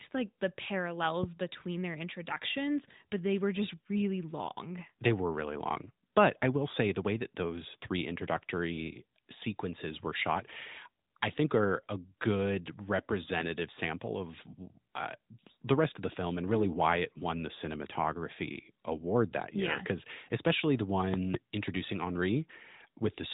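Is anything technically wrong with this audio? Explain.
Yes. Two loud pops hit from 21.14 to 21.37 s, just after "especially the". A sudden voltage pulse, likely from a plug, switch or static, adds sharp pops about 20 dB above the speech. The speech carries on underneath.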